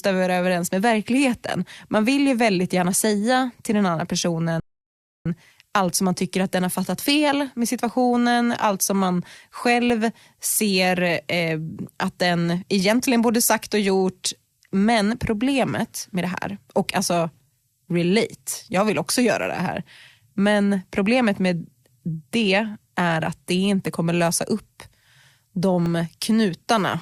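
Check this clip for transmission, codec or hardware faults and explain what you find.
Two faults here, one playback stall and a run of regular dropouts.

Right after "säga till den andra", at 4.60 s, there's a rebuffering stall: the player ran dry, went silent for 0.66 s, then resumed exactly where it stopped.

From 5.89 to 25.86 s, periodic USB or driver dropouts blank about a millisecond every 2.0 s, around ten times, heard as regular ticks over the speech.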